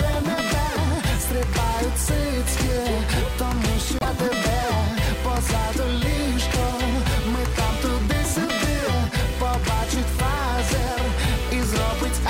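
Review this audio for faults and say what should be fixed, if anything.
From 3.99 to 4.06 s the audio jumps ahead and the next 70 ms or so come out garbled, likely from a broken MP3 bit reservoir: after cut frames, the following 26.1 ms frames fetch borrowed bits from the wrong frame. A plain dropout would leave clean silence without skipping ahead. Cut MP3 streams only at frame boundaries that reset the reservoir, or decode before editing.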